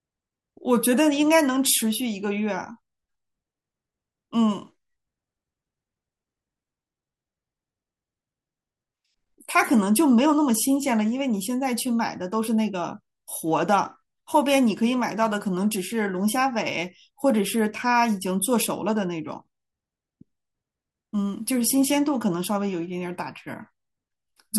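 Speech recording with no technical faults heard anywhere in it.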